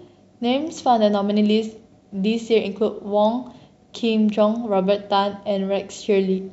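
No technical faults can be heard anywhere in the recording.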